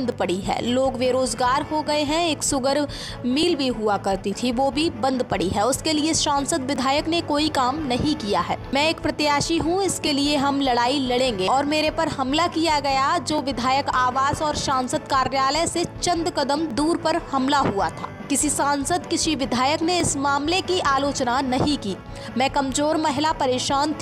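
From 0.12 s to 23.33 s, a regular click recurs every 3.32 s, about seven times. These are clock drift buffer slips. Two clocks likely disagree by around 400 ppm, so a buffer periodically drops or repeats about 70 samples.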